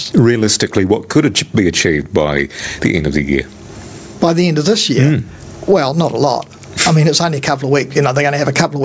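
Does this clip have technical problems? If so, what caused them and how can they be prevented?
Yes. Gain pumping runs through the whole clip: the gain swings by about 20 dB, pulled down on loud sounds, squashing the level range. The likely cause is input gain set far too high, with a fast limiter clamping each peak. Unlike a noise gate, it turns the level down rather than cutting the sound to silence. Lowering the microphone gain so the limiter rarely engages prevents it.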